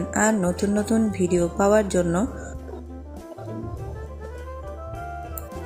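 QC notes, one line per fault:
No faults heard.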